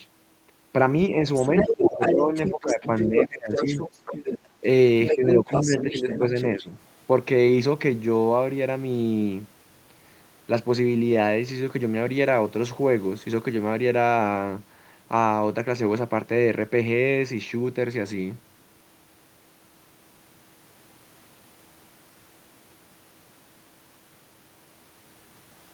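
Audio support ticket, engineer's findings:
Other side's voice leaking through, 1.34 to 4.38 s and again 5.07 to 6.67 s. Far-end voice sits right alongside the near talker, about level with it. Likely the echo canceller not fully removing the loudspeaker playback from the mic, so the residual echo passes into the send path. Two stretches, both a second or more, not just brief scraps.

Speech suppressed in double talk, 1.64 to 3.84 s, 4.61 to 4.66 s, 5.15 to 6.69 s. Near talker dips while both sides are talking, deepest around 15 dB in the first stretch, around 10 dB in the others. Roughly 1.5 s affected in the first, a 50 ms blip at 4.6 s, about 1 s in the third. Likely the echo canceller's suppressor failing to separate the talker from the echo and ducking both.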